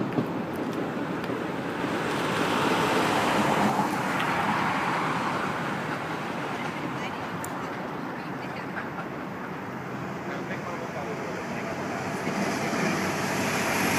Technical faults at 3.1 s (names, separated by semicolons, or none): doubled audio track